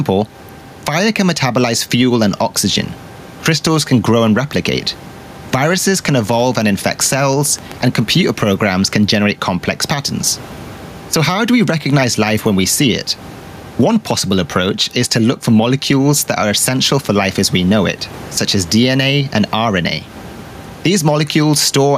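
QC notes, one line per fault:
Throughout, gain pumping: the gain is pulled down by around 10 dB under each loud syllable, likely from excessive input gain driving a fast limiter.
6.27–7.99 s, train of clicks: about fifteen similar clicks at a regular 7.6 per second, roughly as loud as the speech, likely from interference or a faulty connection.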